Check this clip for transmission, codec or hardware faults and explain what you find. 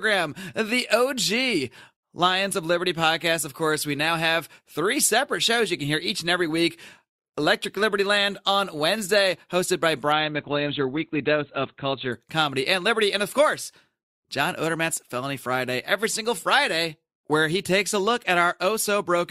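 One fault turns up. From 10.12 to 12.12 s, after "hosted by" and before "comedy and liberty", the speech suddenly goes dull, with nothing above 4.5 kHz and no gap. This is an adaptive stream at a lower bitrate: playback switched briefly to a leaner Opus version, consistent with a drop from about 64 to 12 kbit/s.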